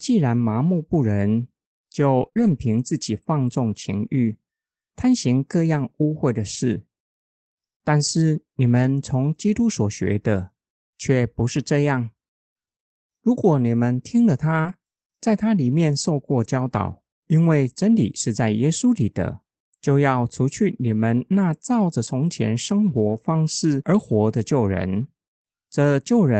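Around 2.21 to 2.47 s there's a cluster. From 2.21 to 2.27 s and again from 2.37 to 2.47 s you get a lost packet rebuilt from error correction: the packets never arrived, so the decoder played the low-bitrate backup copies carried in the following packets. There's no gap, but those stretches turn rougher and grainier. The same thing happens from 14.64 to 14.74 s and from 23.08 to 23.18 s.

Sandwiched in that first cluster, from 2.29 to 2.33 s and 2.33 to 2.37 s, are two bits of short concealed packet loss, about 20 ms each that never showed up in time. The decoder papered over them by stretching the preceding sound before blending back, so you hear a quick smear or wobble. There's another at 14.61 to 14.66 s, where about 40 ms went missing, running straight into the 14.64 s rebuild.

Underneath it all, the Opus call path keeps everything capped around 8 kHz, with the coding haze you'd expect from a bitrate somewhere near 24 kbps.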